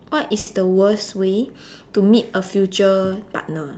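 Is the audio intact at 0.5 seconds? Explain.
Yes, but just barely. A short stall from a late packet runs from 0.39 to 0.48 s. A packet arrived late and the jitter buffer emptied. The receiver stretched the last sound for about 70 ms, so it is held too long, with a slight buzz. Nothing is lost.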